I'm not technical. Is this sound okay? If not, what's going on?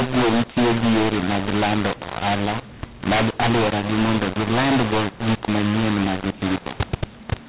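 No, it isn't okay. The whole recording has a mu-law and A-law mix-up. The speech was stored using the mu-law version of standard telephone coding and then played back as if it were A-law, the other version. Because the two use different volume scales, loud and soft parts come out at the wrong levels, so the voice sounds harsh and gritty from start to finish, and even the quiet gaps fill with a hiss instead of going silent.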